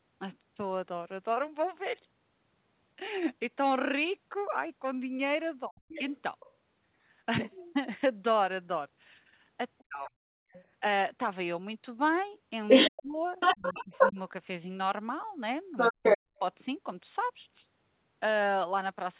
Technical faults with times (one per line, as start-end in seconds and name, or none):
5.68-6.05 speech suppressed in double talk
5.88-6.53 other side's voice leaking through
9.78-16.39 other side's voice leaking through
9.87-16.31 speech suppressed in double talk
10.45-10.51 background gated by the echo canceller